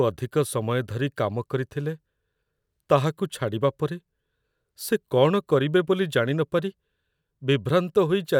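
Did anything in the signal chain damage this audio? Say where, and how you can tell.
No, nothing in the signal chain audibly damaged this speech recording. No stage shows any audible fault, so there is nothing to locate or explain.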